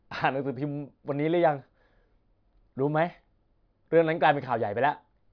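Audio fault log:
No audible technical faults in this speech recording.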